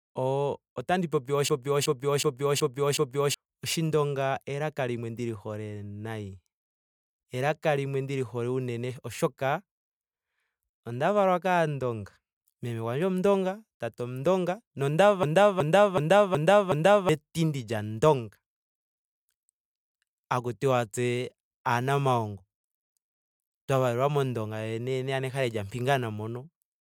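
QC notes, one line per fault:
1.49–3.34 s, after "otandi popi", and 15.23–17.09 s, before "lya ondonga": system hang loop. A 0.37 s slice of speech repeats exactly five times at 2.69 Hz, a stutter from the hardware recycling one ring buffer (fits a 16384-sample buffer), losing roughly two seconds each time. Waveform and spectrogram show identical blocks tiled end to end.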